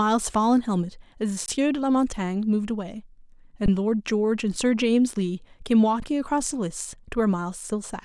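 At 1.46 to 1.48 s, 3.66 to 3.68 s and 6.00 to 6.02 s the speech briefly freezes, each time an underrun with held sample lasting 20 ms. The output buffer ran dry, and the converter just kept holding its last value, so the waveform sits flat instead of dropping out with a click. Nothing seems to go missing; playback picks up where it left off, so each gap ends softly, like a tiny stall.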